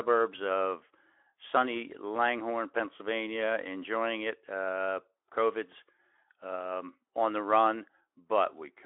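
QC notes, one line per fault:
No fault to note for this clip.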